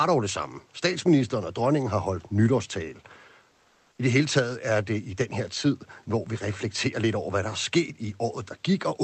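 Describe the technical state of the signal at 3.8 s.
From 3.51 to 3.97 s, comfort noise in place of the background: the room noise turns steady and featureless, shifting about 3 dB, rather than dropping to silence, likely from Opus DTX.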